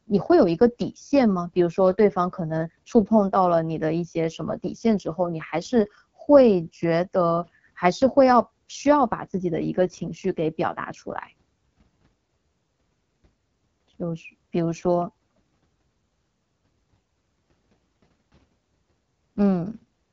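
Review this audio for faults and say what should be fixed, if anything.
The speech sounds rough and raspy from start to finish, with a buzzy, grainy texture and nothing at all above 7.2 kHz. This is the AMR wideband (HD Voice) codec running at one of its lowest rates, which fits 8.85 kbit/s. Its pulse-driven vocal tract model has too few bits to shape the excitation cleanly below 6.4 kHz, and the top band is only filled with shaped noise, so the damage is plainly audible. To prevent it, carry the call at 12.65 kbit/s or higher, or use a higher-quality codec.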